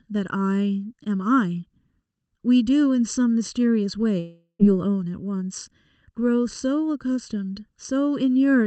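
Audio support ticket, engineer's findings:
Channel delay (comb filtering), whole clip. Speech hollow and phasey. One channel lags by under a millisecond before the mono sum. Notches fall at even spacing, the first one around 700 Hz. Check the channel alignment in the capture or mix chain.

Long network dropout, 4.19 to 4.61 s. The sound turns to a fading buzz or hiss for about 0.4 s. A short silence follows, then speech resumes with roughly 400 ms lost. Likely packet loss, with the receiver's concealment masking the gap.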